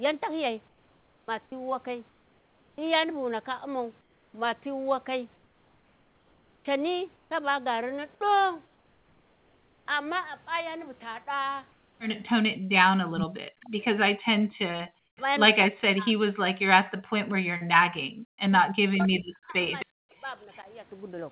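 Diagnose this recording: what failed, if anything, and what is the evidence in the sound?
Call processing, at the sender's discontinuous-transmission stage, most likely shows sound chopped by the voice detector between 0.68 and 9.86 s. The detector kept switching transmission on and off, and about 4.3 s of that stretch was filled with synthetic comfort noise instead of the real signal. The speech sounds choppy, with quiet edges clipped away.

Comfort noise in place of the background, probably from the same discontinuous-transmission logic, appears at 11.72 to 11.99 s (270 ms) and 14.99 to 15.17 s (180 ms). During those pauses the sender stopped sending, and the receiver substituted noise shaped only roughly like the room. The textured real background gives way to a steady, featureless hiss about 4 dB quieter, then snaps back when the sound resumes.

The echo canceller produced background gating from 12.55 to 12.70 s. 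While the far-end loudspeaker was active, it clamped the microphone path hard, by about 39 dB at the deepest point, for something like 150 ms. The room tone drops out almost completely for that brief moment and returns as soon as the canceller releases.

Four bursts of echo leak occur at 13.21 to 13.27, 13.80 to 13.85, 19.79 to 19.86 and 20.52 to 20.57 s. The far side's canceller likely failed to subtract all of its loudspeaker pickup. Each burst is a scrap of the voice returned 264 ms late. The first is strong, only about 5 dB below the speech. The one at 19.79 s sits roughly 15 dB down, and the other two are faint, around 30 to 35 dB down.

Speech suppressed in double talk runs from 13.26 to 20.66 s and likely came from the echo canceller failing to separate the local talker from loudspeaker echo while both ends spoke at once. It attenuated everything, by as much as roughly 40 dB, for about four seconds in total. 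The voice dips across that span. All of this rides on a G.711 mu-law path whose audio stops at 4 kHz.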